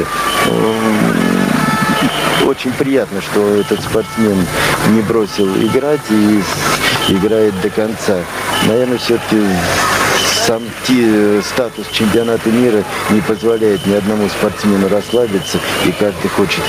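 Gain pumping runs right through the clip: the level keeps lurching, ducking hard, by around 15 dB, under each loud sound. The likely cause is input gain set far too high with a fast limiter clamping down, leaving everything squashed.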